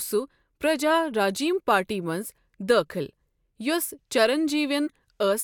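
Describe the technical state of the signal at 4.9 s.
Right around there you get a corrupt frame decoded, from 4.87 to 4.89 s. A single damaged compressed frame got played anyway, so misread codes throw energy into the wrong frequencies. It comes out as a short chirp, squeak, blip or burst of noise peaking around -25 dBFS in the speech.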